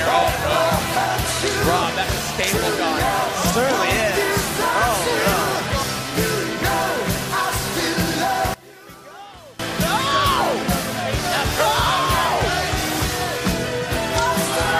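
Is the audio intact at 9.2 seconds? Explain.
No. From 8.54 to 9.59 s the audio nearly vanishes, dropping about 23 dB, likely from one channel inverted cancelling the shared content in the mono sum.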